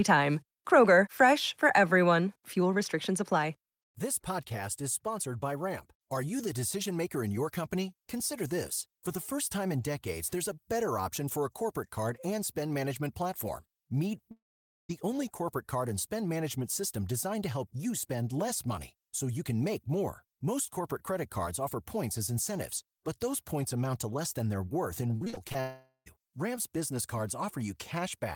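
From 14.31 to 14.91 s the sound trails off into a fading buzz and about half a second of near silence, then picks up at "only corporate card and" with roughly 0.58 s gone. That's likely a long network dropout.

Right after "worth in", 25.17 to 25.56 s brings repeated packet loss (robotic sound): six short holes, the longest 39 ms, each patched by stretching the previous sound. About 35% of that span is filler, so it comes out choppy with bits missing.

Straight after, from 25.61 to 26.08 s, a second likely long network dropout drags the last sound out and fades it, with about 0.1 s near silent, and drops roughly 0.46 s of audio.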